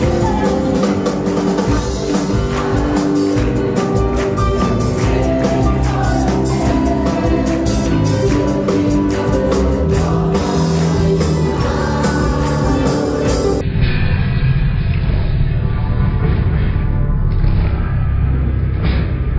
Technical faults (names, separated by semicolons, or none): wrong sample rate